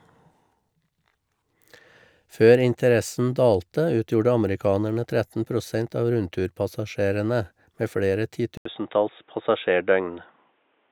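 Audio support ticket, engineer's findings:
Speech bandwidth collapses at 8.57 s, after an 80 ms dropout, and stays dull and boxy to the end. Nothing above 3.8 kHz. Level unchanged, with a new faint noise floor far below the speech. Input switched to a poorer device, likely a narrowband headset call profile or secondary mic taking over capture mid-recording.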